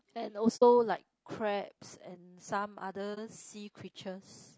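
Throughout, the speech sounds rough and grainy, with noise filling the gaps between harmonics and a thin, synthetic top end. This is low-delay AAC compression, likely AAC-ELD at a low bitrate around 32 kbps, where short frames resolve pitch poorly. At 0.56 s and again at 3.14 s, the sound fades out and back in, leaving a soft-edged hole of roughly 60 ms and a brief dip of roughly 30 ms. This is AAC frame loss with muting: the decoder zeroed the missing frames, and overlapping windows smoothed the edges.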